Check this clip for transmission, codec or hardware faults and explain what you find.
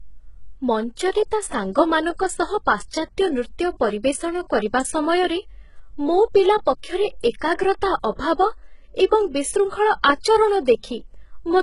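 One codec fault runs through the whole speech clip. Throughout, sibilants sound gritty and metallic, and nothing is heard above 11.1 kHz. The likely cause is heavy HE-AAC compression, rebuilding treble from copied lower bands, which fits roughly 12 kbps.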